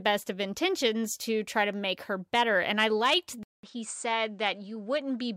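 Speech clip; after "better and I liked" at 3.43 s, a 200 ms gap precedes duller, quieter sound capped at 9.3 kHz with new faint noise, likely an input switched to a poorer device.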